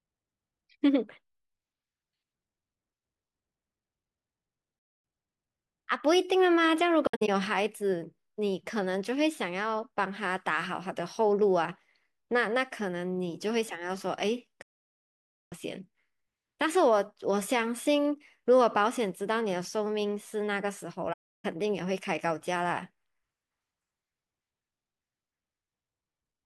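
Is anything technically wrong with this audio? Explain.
Yes. The speech has AAC frame loss with muting at 7.07–7.29 s, 14.62–15.52 s and 21.13–21.45 s. Lost frames are decoded as silence, and overlapping windows fade each gap out and back in, so the holes are soft-edged, unlike a hard-cut dropout. The first hole is broken, with about 150 ms missing across 0.21 s and no run much longer than 70 ms. The second is a near-solid 0.9 s silence.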